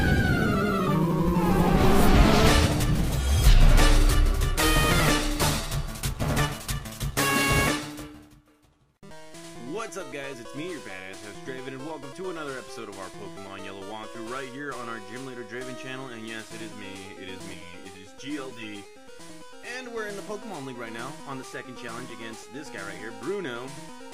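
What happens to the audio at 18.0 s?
Channel delay (comb filtering) from 17.54 to 19.67 s: one channel lags roughly 10 ms, so the mono sum sounds hollow, with notches from near 50 Hz appearing as evenly spaced dark horizontal bands on a spectrogram.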